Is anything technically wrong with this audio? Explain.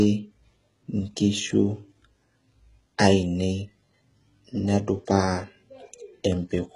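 Yes. Throughout the speech there is heavy damage that points to HE-AAC compression as the likely cause. The band-limited, synthetic treble fits a very low bitrate, around 12 kbps. The core codec carries only the lower spectrum, and the treble is rebuilt by copying lower bands upward under a coarse envelope, so its harmonics no longer align with the originals. Nothing reaches above 11.1 kHz, and the s sounds come across gritty, metallic and lispy.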